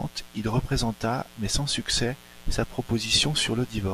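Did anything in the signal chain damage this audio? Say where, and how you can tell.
Yes. A mains buzz runs through the whole speech clip, entering in the analogue wiring. Sharp 60 Hz switching spikes from a dimmer, rectifier or poor shielding give it a raspy, steady edge with harmonics into the kilohertz range, unlike a smooth, low-pitched ground-loop hum. It sits fairly high, about 25 dB below the speech.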